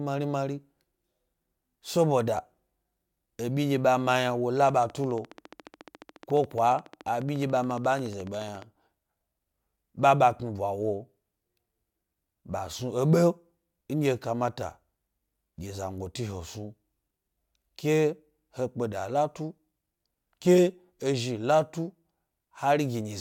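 Speech, with a train of clicks from 4.69 to 8.63 s: around fifty near-identical ticks at a steady 14.2 per second, roughly as loud as the voice, continuing through pauses. That even spacing and uniform shape set it apart from random crackle, and point to likely electrical interference or a faulty connection or power supply.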